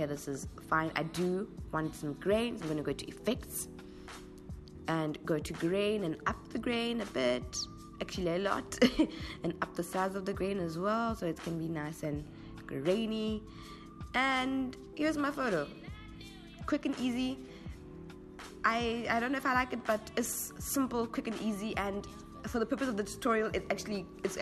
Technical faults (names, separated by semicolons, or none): none